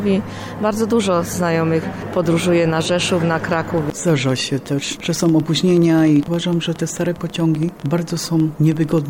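From 3.53 s to 8.99 s, a train of clicks runs over the sound. About seventy pulses arrive at roughly 12.5 per second, unevenly spaced, peaking around 5 dB above the audio. They sound like ragged ticking. Likely cause: electrical interference or a faulty connection or power supply.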